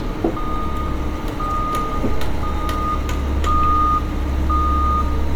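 Throughout the clip the sound has a swirly, hollow quality, with smeared transients and attacks that lose their edge. This is generation loss, likely from MP3 encoding repeated about ten times at settings that point to roughly 130 kbit/s. Each pass re-quantises on a shifted frame grid, so noise and spectral gaps accumulate. A spectrogram would show flickering holes and blotchy high-frequency bands below a ceiling near 20 kHz, and the waveform would show softened onsets.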